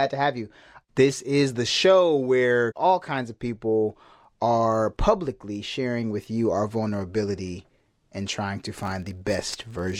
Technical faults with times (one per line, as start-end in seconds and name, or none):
8.75-9.99 filter restarted on every block